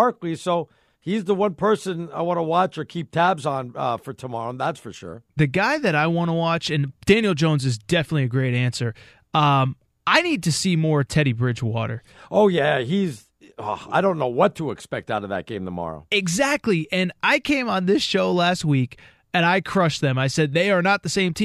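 No technical faults can be heard anywhere in the recording.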